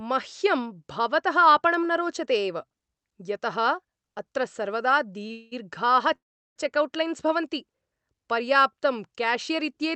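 At 5.27 to 5.32 s the speech hangs for a moment: a short stall from a late packet. The jitter buffer emptied, so the last sound was stretched by about 23 ms. On a spectrogram the harmonics run flat and unchanged, with a slight dip in the waveform.

A call audio freeze follows at once, from 5.32 to 5.54 s, likely caused by held-up packets. About 200 ms of buzzy continuation fades without reaching silence. A second freeze, 6.15 to 6.58 s, fades into roughly 380 ms of flat-line waveform before speech resumes where it left off. Above 8 kHz the spectrogram stays empty throughout, as expected from the call codec.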